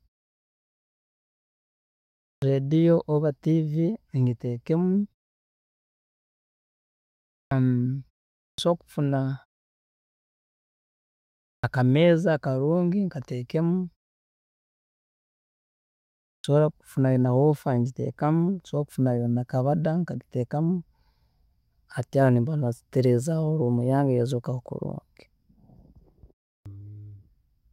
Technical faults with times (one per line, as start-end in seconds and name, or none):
2.36-2.42 clipped start after a pause
7.45-7.51 clipped start after a pause
8.52-8.58 clipped start after a pause
11.57-11.64 clipped start after a pause
16.38-16.44 clipped start after a pause
26.60-26.66 clipped start after a pause